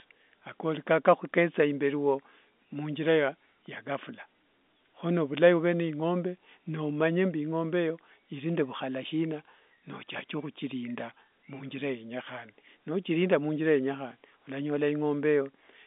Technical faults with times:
none

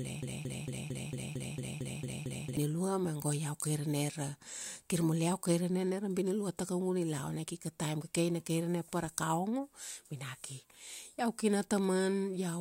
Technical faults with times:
0.00-2.57 broken-record loop

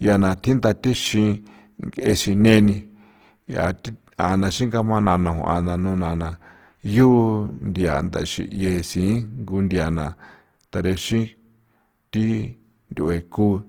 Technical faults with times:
0.00-13.69 Opus compression

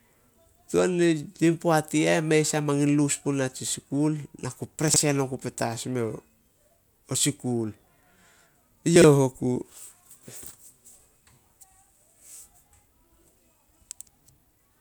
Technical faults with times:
4.88-4.96 chunks out of order
8.96-9.04 chunks out of order

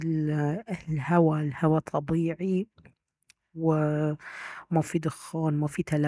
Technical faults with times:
none

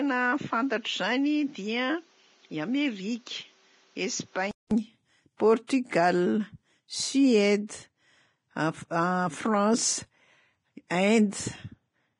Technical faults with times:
0.00-12.20 Vorbis compression
0.00-4.71 input switched to a poorer device
5.67-5.69 pre-echo
10.89-10.91 pre-echo

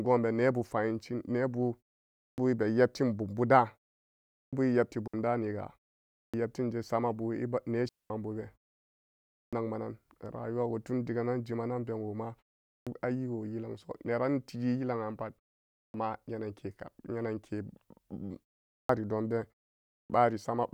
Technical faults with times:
2.23-2.38 clipped start after a pause
4.38-4.53 clipped start after a pause
5.08-5.14 digital wireless dropout
6.20-6.34 clipped start after a pause
7.89-8.10 digital wireless dropout
9.38-9.53 clipped start after a pause
12.71-12.87 clipped start after a pause
15.80-15.94 clipped start after a pause
18.74-18.89 clipped start after a pause
19.96-20.10 clipped start after a pause

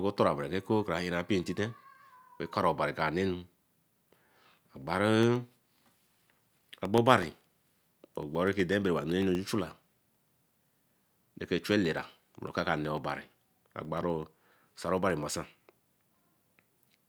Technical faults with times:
5.23-16.97 periodic USB or driver dropouts

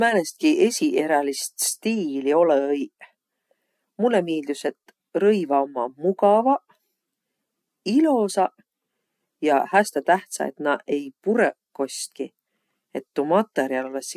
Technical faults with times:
none

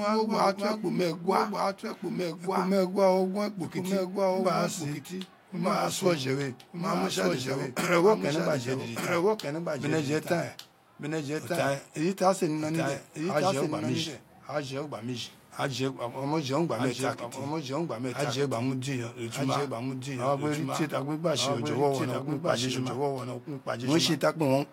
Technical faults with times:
0.00-24.73 doubled audio track

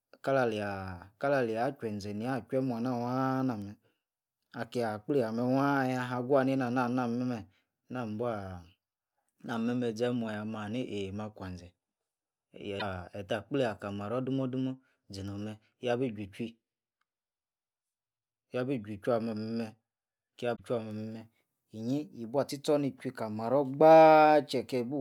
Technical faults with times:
4.74 damaged data in a compressed stream
12.76-12.82 damaged data in a compressed stream
20.52-20.60 damaged data in a compressed stream

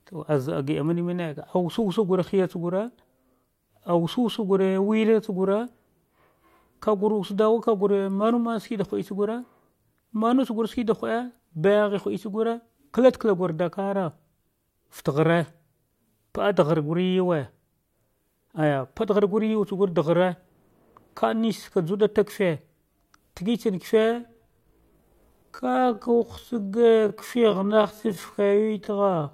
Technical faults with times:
24.11-29.34 time-stretched section

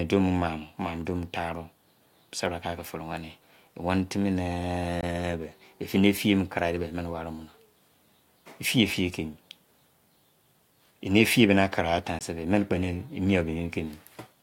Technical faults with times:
5.01-5.03 Bluetooth dropout
12.19-12.21 Bluetooth dropout

